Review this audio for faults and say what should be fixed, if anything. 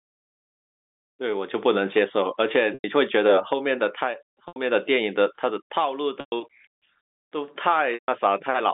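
Packet loss with pitch repetition at 2.74, 4.48, 6.2 and 7.94 s, gaps of 100, 80, 120 and 140 ms. Each time the last pitch period repeats briefly, fades toward silence, then cross-fades back into the telephone-band speech. A bigger jitter buffer or forward error correction on the link should stop these.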